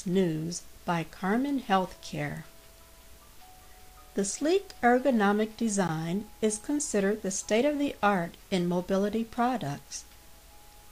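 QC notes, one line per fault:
5.88 s, block of digital silence: the sound drops to silence for about 15 ms and returns with no fade on either side. The sound cuts out and back abruptly, leaving a brief gap.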